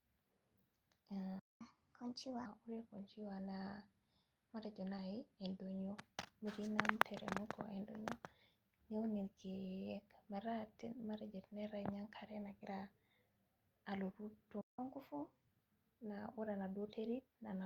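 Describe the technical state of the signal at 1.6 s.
Right at 1.6 s the speech is coming out of a playback stall: the output drops to silence from 1.39 to 1.61 s, about 210 ms, most likely because the player ran dry or its thread got blocked, then picks up where it cut off. From 1.61 s a catch-up at higher speed kicks in, with the player resampling its backlog at 1.25 times normal speed until 2.46 s. The speech sounds hurried and noticeably raised in pitch, around four semitones.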